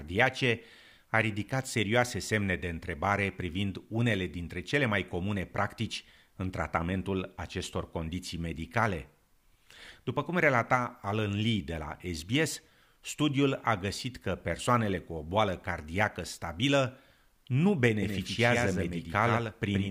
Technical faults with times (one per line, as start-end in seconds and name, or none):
18.03-19.91 doubled audio track